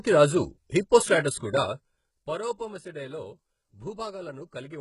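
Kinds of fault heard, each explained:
HE-AAC compression: heavy damage across the whole speech clip, with nothing above about 11.1 kHz and a synthetic, gritty treble where upper bands are rebuilt from lower ones. Sibilants sound metallic, pointing to a likely very low bitrate near 12 kbps.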